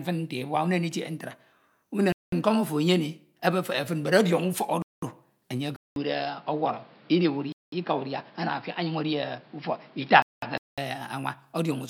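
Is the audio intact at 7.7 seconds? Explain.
No. A gap between chunks runs from 7.52 to 7.72 s, so 7.7 s falls right at the end of a 200 ms hole. The audio appears to be delivered in blocks of 2.5 s, and silence has been inserted at the join instead of the next block starting on time. Nothing is cut out, but the speech is interrupted, leaving a short hole in the sound.

That moment also sits inside a stretch from 5.76 to 10.78 s where the input most likely switched to a poorer device. It begins with a 200 ms silence. After that, the speech has nothing above 5.5 kHz, so it sounds dull and boxy. The loudness stays about the same, but a new background noise appears, roughly 30 dB below the speech.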